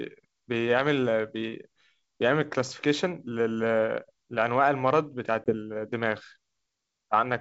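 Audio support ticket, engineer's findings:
Packet loss on the ADPCM call, 5.44 to 5.55 s. About one packet dropped, leaving a 20 ms hole filled with silence. The decoder's predictor and step size lost sync with the sender, so the hard-edged gap is followed by brief, slight distortion until the decoder resyncs. The G.722 path underneath sounds clean to 7 kHz, which points to the 64 kbit/s mode.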